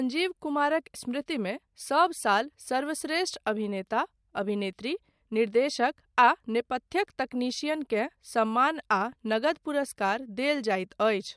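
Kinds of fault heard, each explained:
No audible faults anywhere in this speech recording.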